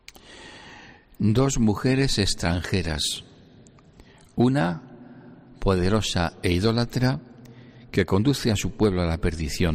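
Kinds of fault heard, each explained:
No technical faults are audible.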